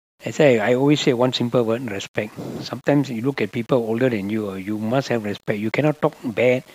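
From start to finish the speech carries a grainy, rough edge that rides along with the voice. It's low bit depth without dither: the gritty texture tracks the signal, sitting roughly 35 dB below the speech, which fits a signal likely rounded down to about 8 bits with no dither to smooth it. Quieter syllables and word tails get noticeably crunchier, and the softest moments break up or sputter rather than fading cleanly.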